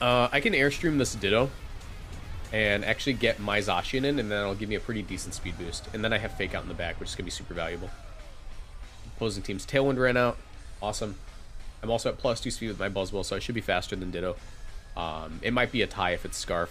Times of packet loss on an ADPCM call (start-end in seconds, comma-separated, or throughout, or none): none